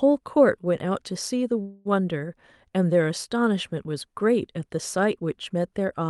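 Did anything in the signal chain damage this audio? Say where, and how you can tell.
Yes. At 1.61 to 1.87 s the speech stops moving forward and the last sound is stretched into a fading buzz or hiss for about 0.24 s, then picks up exactly where it left off. This is a call audio freeze at the network and jitter-buffer stage. Packets were likely held up in transit, so the buffer ran dry and the receiver concealed the wait. Nothing is lost, but everything after 1.87 s plays about 0.24 s later.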